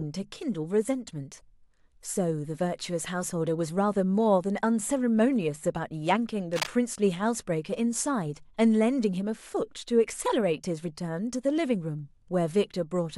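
At about 6.53 s the speech picks up a short burst of cable scratch noise, lasting roughly 0.16 s until around 6.69 s. It's a dense, ragged crackle sitting only a little below the level of the talker, so it's hard to miss. The likely cause is a worn lead, plug or pot being nudged, with the contact resistance jittering as it moves and spraying uneven noise bursts straight into the signal.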